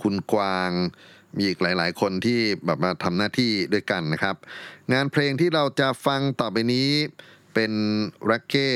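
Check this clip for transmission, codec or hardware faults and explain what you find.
There's one fault here, a bit error spike at 1.85 s. A single sample gets knocked off its true value, most likely by one flipped bit somewhere in memory or on a digital link, so the level jumps by a power of two and snaps straight back on the next sample. It peaks around -35 dBFS, so it's small, but because it's one isolated sample it comes out as a single sharp tick, spread across the whole spectrum, with no relation to the speech around it.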